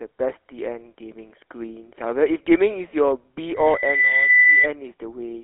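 A speech recording carried over a GSM full-rate codec throughout. The sound points to the 13 kbps coder, which models the vocal tract and rebuilds the excitation from sparse, regularly spaced pulses. The result is a plainly audible buzzy, gravelly roughness, a narrow telephone band of roughly 0.3 to 3.4 kHz, and nothing above 3.8 kHz. From 3.55 to 4.69 s, a microphone picks up the loudspeaker it feeds and the loop's gain rises above one at 2 kHz, producing a loudspeaker feedback squeal. That single tone swells over about half a second to roughly 10 dB above the speech before it stops.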